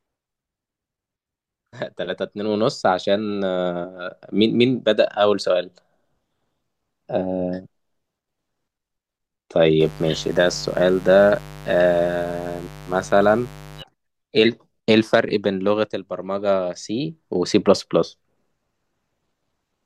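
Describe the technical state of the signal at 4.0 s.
At 4.0 s the speech signal is intact, with no audible technical fault at that moment.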